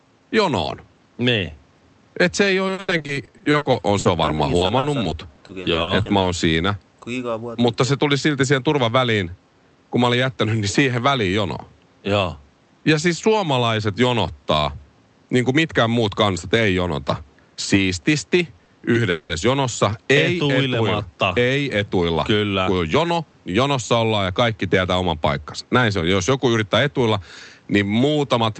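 From 2.67 to 6.25 s, repeated packet loss gives a choppy, robotic sound: short gaps up to 80 ms are patched with repeated sound, and about 0.66 s is genuinely missing. From 18.58 to 19.32 s, repeated stalls make the speech stutter and drag through holds of up to 190 ms, but unlike the loss, nothing is dropped.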